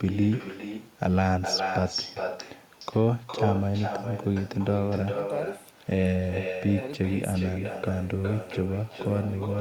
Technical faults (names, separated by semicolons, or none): echo with no canceller